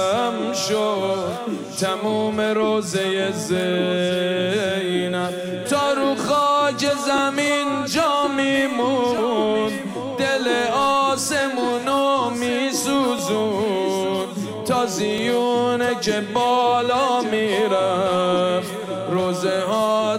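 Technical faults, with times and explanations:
7.18 to 15.18 s, periodic USB or driver dropouts: something blocks the audio path every 2.0 s, and around a millisecond of audio is skipped each time, about five times. The sound splices across each gap, leaving a regular, evenly spaced tick.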